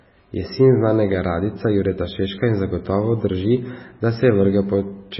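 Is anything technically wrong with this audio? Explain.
Yes. Throughout the speech, there are signs of MP3 compression, likely at a very low bitrate. Short of bits, the encoder cuts everything above about 5.6 kHz and drops weak frequency lines frame by frame, leaving a heavy watery, swirling texture, dull treble and smeared consonant attacks.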